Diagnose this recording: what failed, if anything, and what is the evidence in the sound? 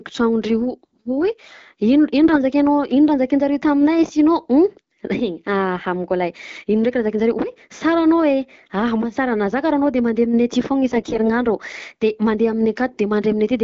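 The radio link failed twice and passed AMR bit errors: a few percent of low-priority bits arrived flipped in frames whose checksum still passed. Misplaced excitation pulses and skewed gain and pitch values turn the clear wideband speech scratchy and gargly at 2.24–2.39 s and 10.89–11.42 s.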